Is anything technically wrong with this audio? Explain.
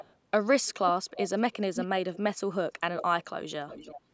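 Yes. Echo leak occurs at 0.0–0.14, 1.1–1.3, 1.75–1.87, 2.13–2.18, 2.96–3.04 and 3.68–3.99 s. The likely cause is a loudspeaker echo canceller letting through a delayed copy of the speech about 0.33 s later, roughly 5 to 25 dB below the speech.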